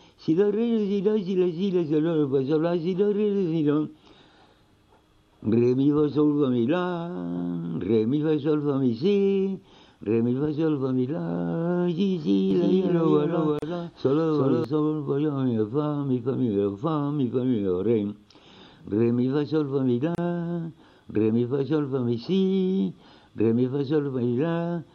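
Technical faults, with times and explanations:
12.51–14.64 s, doubled audio track: The sound is likely being captured a second time through a slower path, so two copies are mixed together. A full-band echo trails the original by roughly 300 ms and sits about 5 dB lower, with no decay or room colour, so it reads as a flat, stuttering repeat rather than reverberation. It cuts in and drops out abruptly at the edges of this span.
13.59–13.62 s and 20.15–20.18 s, gap at a join of encoded pieces: Separately encoded segments were spliced without trimming the encoder's start-up delay and end padding, so silence stays in at each join. Continuous sound breaks for 35.6 ms and then 30.7 ms, with edges smeared by the codec so the silent part is shorter, and resumes exactly where it left off. The first gap falls inside the doubled stretch.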